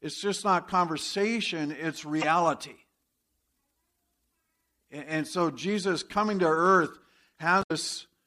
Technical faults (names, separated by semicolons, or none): damaged data in a compressed stream